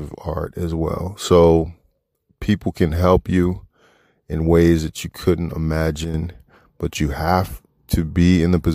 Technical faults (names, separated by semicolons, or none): sudden gain jump